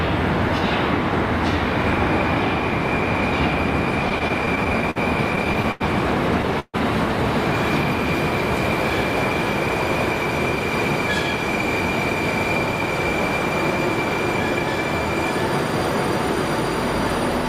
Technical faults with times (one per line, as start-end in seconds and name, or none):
4.09-4.98 repeated stalls (stutter)
5.36-5.82 repeated stalls (stutter)
6.60-6.76 call audio freeze